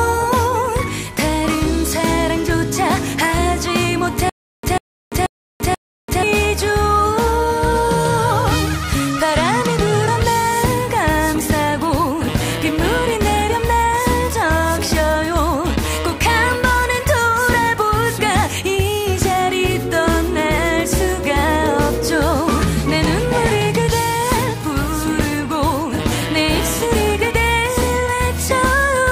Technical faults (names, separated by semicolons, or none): stutter with silent gaps